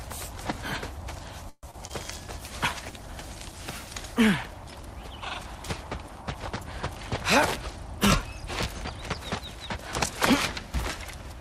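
At 1.49 s the audio stalls until 1.65 s. The last sound is stretched into a fading buzz that sinks into about 50 ms of silence, and then the audio resumes exactly where it left off. This is a call audio freeze, likely caused by packets held up in transit while the jitter buffer ran dry. What sets it apart from packet loss is that nothing is missing. Roughly 134 ms is inserted, and the playback delay grows by that amount.

Right after it come two short concealed packet losses, at 1.71 to 1.75 s and 1.87 to 1.91 s. In each, about 20 ms of real audio never arrived in time and was replaced by a continuation of the preceding sound. Each is heard as a brief smear or wobble before the audio blends back in. Unlike the freeze, these remove audio instead of pausing it, and they are far too short to produce an audible fade.

From 2.2 s to 6.89 s there is a call bitrate drop. The encoder was pushed from 128 kbps down to 19 kbps and stayed at that floor for about 4.6 s. 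The sound turns coarse and watery from the coarser coding, and muffled because the top frequencies are cut away. It is a sustained change in tone, not a gap or glitch, and it clears once the rate recovers.

Finally, from 7.69 to 8.69 s, a jitter buffer speed-up plays the audio about 4% fast. Small pitch-period slices adding up to a few hundredths of a second were trimmed to shrink an oversized buffer. The pitch stays the same, which distinguishes it from a sample-rate error, and the speed-up stays just under the point where it would start to sound hurried.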